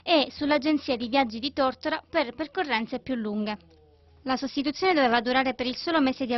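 No technical faults can be heard anywhere in the audio.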